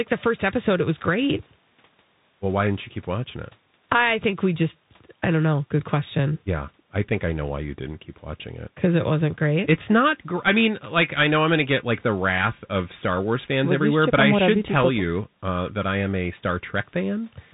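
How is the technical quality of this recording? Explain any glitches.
Poor, because the whole clip has passed through a Bluetooth CVSD headset codec. Its one-bit up-or-down steps, consistent with 64 kbps, cut everything above 3.8 kHz and can't track sharp peaks, so the speech sounds muffled, with scratchy s sounds and a grainy hiss underneath.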